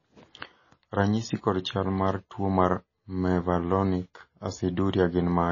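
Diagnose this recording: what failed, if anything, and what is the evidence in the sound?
MP3 compression artefacts run through the whole speech clip, placing the fault at the codec stage. Nothing is heard above about 7.1 kHz, a hard treble ceiling of the kind an encoder imposes when bits run short, and the damage is plainly audible throughout. That fits a starved bitrate around 24 kbps. The likely mechanism is the encoder dropping the upper band and zeroing weak frequency lines frame by frame, which leaves the sound watery and smears attacks.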